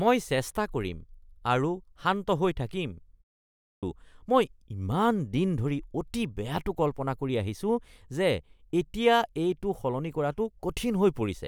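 A speech recording with a clipped start after a pause at 3.57 s. After a 0.42 s gap, the output device needs time to wake again, so about 0.26 s of sound, up to 3.83 s, is swallowed and the next phrase begins abruptly without its onset. On a waveform the pause runs straight into speech already in progress with no rising attack, and a spectrogram shows energy appearing as a hard vertical edge. The pause itself is muted but loses no speech.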